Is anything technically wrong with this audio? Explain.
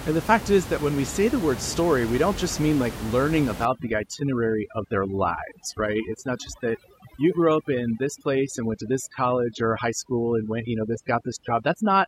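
Yes: overdone noise removal runs from 3.65 s, right after "just mean like learning", to the end. The noise reduction is set too hard against room noise only about 12 dB below the speech, so it mutes bands near its noise estimate, taking quiet speech detail with them. The background collapses to twinkling near-silence.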